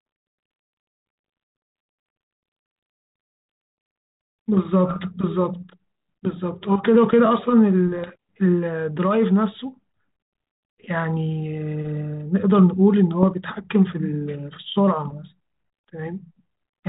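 Bit errors on the ADPCM link flip bits in the coded stream, throwing the decoder's step size and predictor off, so pops and rough, level-jumping bursts ring on from 4.89 to 5.00 s, from 7.97 to 8.12 s, and in a brief click at 13.23 s. The band stops at 4 kHz, which fits 32 kbit/s G.726.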